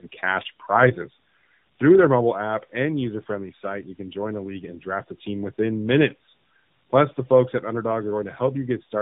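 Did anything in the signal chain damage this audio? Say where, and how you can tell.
Yes, tandem speech coding throughout the clip, at the codec stage. Speech sounds rougher, muffled and warbly, with nothing above 3.8 kHz. This points to two AMR-NB encodings in a row, likely bridged by G.711, each coder re-quantising the previous one's degraded output.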